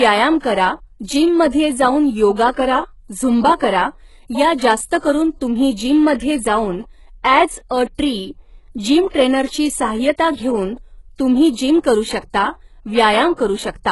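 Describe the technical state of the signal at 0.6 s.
At 0.6 s the speech carries the same damage heard throughout the clip, most likely HE-AAC compression at a very low rate, consistent with roughly 12 kbps. The codec damage is heavy. The treble is rebuilt by spectral band replication, copying lower bands upward, so s sounds turn gritty or lispy. On a spectrogram the energy stops at a flat ceiling near 11.5 kHz, and the upper band shows repeated, coarsely shaped patches rather than true harmonics.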